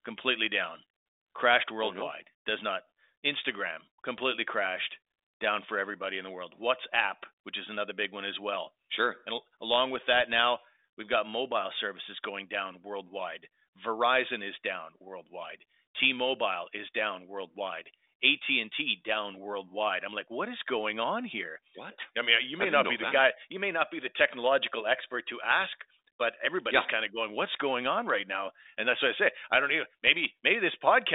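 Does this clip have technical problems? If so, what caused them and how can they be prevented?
Yes. From 22.09 to 23.12 s, just before "guy you may not", the speech slows by about 5.5% and drops nearly a semitone (about 98 cents), then snaps back. This is likely a drift correction step, where clock-matching software abruptly changed the playback rate to rebalance its buffer. On a spectrogram, the harmonic lines step down together and jump back up at 23.12 s. Correcting drift through gradual, continuous resampling rather than a single rate step prevents this.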